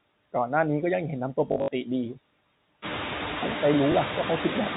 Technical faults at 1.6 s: noise suppressor artifacts; packet loss with last packet repeated

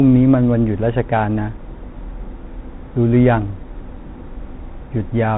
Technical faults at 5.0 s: Bluetooth CVSD headset codec

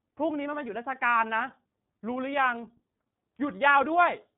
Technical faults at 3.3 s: iLBC codec

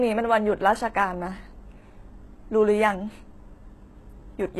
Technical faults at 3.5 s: HE-AAC compression

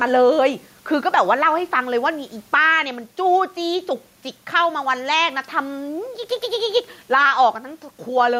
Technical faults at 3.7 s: gain pumping

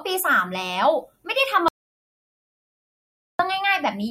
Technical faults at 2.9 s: audio dropout to silence

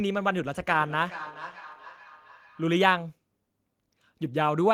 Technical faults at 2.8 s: feedback echo between two devices

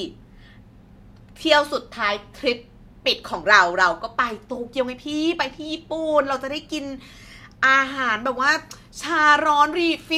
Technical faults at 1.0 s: none

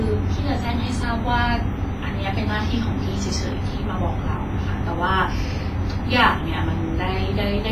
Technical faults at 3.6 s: WMA compression

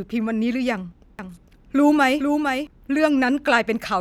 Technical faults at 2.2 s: doubled audio track

